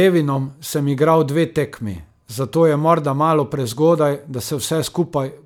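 Speech, with no audible technical fault anywhere in the recording.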